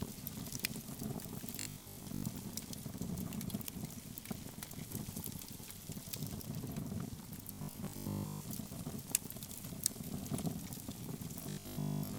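From 1.61 to 2.23 s, 7.53 to 8.53 s and 11.43 to 12.17 s, robotic sound from repeated short buffers turns the audio into a rigid 50 Hz buzz, likely from a 20 ms chunk looping while most new audio is skipped. Unlike dropout gaps, nothing falls silent.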